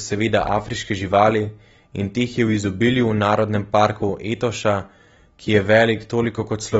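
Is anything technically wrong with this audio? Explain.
Yes. Throughout, the speech is band-limited with nothing above 7.7 kHz, sounding dull and warbly, likely from AAC compression at roughly 30 kbps discarding high-frequency detail.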